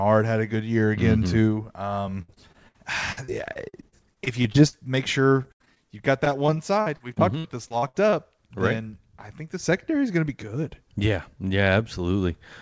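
Repeated packet loss (robotic sound) hits at 2.22 to 2.76 s, 3.12 to 4.75 s, 5.43 to 5.81 s just before "you've got", and 6.25 to 8.14 s ending at "right then I think". Gaps up to 78 ms are filled by stretching the last sound, giving choppy sound with pieces missing rather than silent dropouts. The G.722 call path leaves nothing above 8 kHz.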